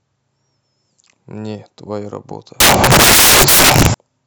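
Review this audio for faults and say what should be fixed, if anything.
From 2.60 to 3.94 s the speech turns into loud, harsh broadband noise: samples built from the wrong bytes. The reader is misassembling each sample, so the jittery low bits end up as the big part of the value. To fix it, make sure the decoder's byte order, offset and sample alignment match the stream's format before reading.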